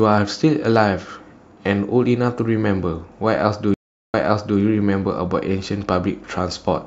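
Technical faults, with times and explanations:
3.74 to 4.59 s, stream reconnect: the speech stops for 0.39 s, then resumes 0.46 s earlier than where it broke off, so a short stretch of speech is heard twice. The connection dropped, the player went silent, reconnected, and a fresh decoder picked up from a server burst that reached back in time. A plain dropout would skip ahead or simply lose audio. A buffer stutter would loop without a gap. Here, one silence followed by one backward jump marks a reconnect.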